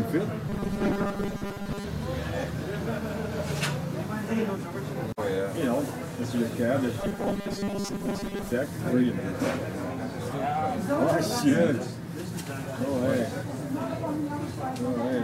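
From 0.49 to 1.84 s, and again from 7.0 to 8.52 s, the sound turns into a rigid metallic buzz at 200 Hz that only loosely follows the original: robotic sound from repeated short buffers, likely caused by audio arriving too seldom so that a 5 ms chunk was replayed for most of each stretch while real audio was skipped. A spectrogram shows evenly spaced horizontal lines at multiples of 200 Hz; the waveform shows identical 5 ms segments repeating.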